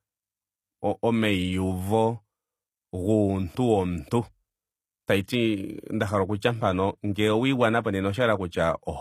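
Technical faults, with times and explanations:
Throughout, HE-AAC compression: the top end sounds bright, but it isn't quite real. The s sounds come out gritty and a bit lispy, with a metallic sheen, and there's nothing at all above about 14.9 kHz. That's likely spectral band replication at work: the codec keeps the lower spectrum and fakes the treble by copying lower bands upward under a rough envelope, so the harmonics don't line up. The damage is plainly audible, which fits a low bitrate around 24 kbps.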